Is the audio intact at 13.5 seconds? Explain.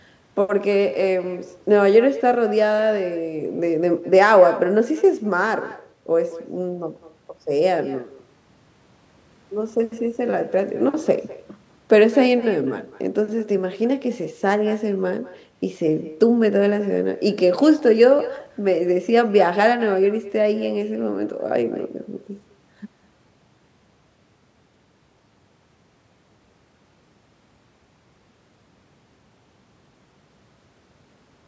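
No. At 13.5 seconds, as throughout the clip, there is echo with no canceller: the far end's loudspeaker feeds its microphone and nothing removes it, so each phrase returns about a fifth of a second later, roughly 18 dB down and thin.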